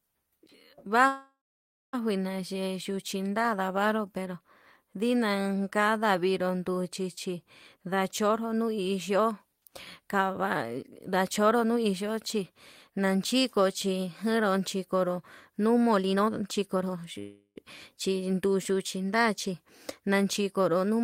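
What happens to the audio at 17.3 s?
A call audio freeze runs from 17.19 to 17.58 s. The jitter buffer likely ran dry while packets were delayed, so the last sound is stretched into a fading buzz and then 50 ms of silence, about 370 ms in all. Nothing is lost, but everything after arrives 366 ms later. On a spectrogram this appears as flat, smeared bands that fade into a short blank column.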